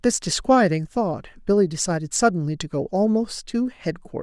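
No technical faults can be heard anywhere in the speech. There is nothing that needs a timestamp or an explanation.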